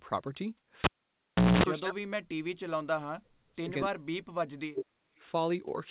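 From 1.79 to 2.15 s, 2.75 to 3.58 s and 3.85 to 5.07 s the speech sinks by about 40 dB, the likely cause being speech suppressed in double talk: with both ends talking, the echo canceller treats the near talker as echo and ducks it. Unlike packet-loss dropouts, these gaps follow the other side's talking and last hundreds of milliseconds, over a band already capped near 4 kHz.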